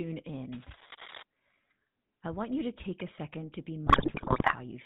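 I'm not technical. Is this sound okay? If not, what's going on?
No. Three separate problems can be heard.

The whole recording carries the sound of the GSM full-rate codec, the compression used by early mobile phones. It rebuilds the voice from a rough model driven by a regular pulse, so the voice comes across buzzy and gravelly, and everything above about 4 kHz is missing, leaving it thin and boxy. Unlike background hiss, this roughness is part of the voice itself and never lets up.

From about 0.53 to 1.23 seconds there is cable scratch noise: a burst of scratching and rustling laid over the voice, nearly as loud as the speech. The likely cause is a worn cable, plug or knob being moved, so its electrical contact flickered. It differs from the phone distortion because it is added on top of the voice rather than bending it, and it stops once the movement stops.

From about 3.86 to 4.55 seconds, GSM bit errors take over. 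A weak mobile signal corrupted the data the phone uses to rebuild the voice, so for that stretch the speech breaks into squawks, pops and gargling, with sudden jumps in tone and loudness. Unlike the scratching earlier, this is the voice itself falling apart, not a noise sitting over it.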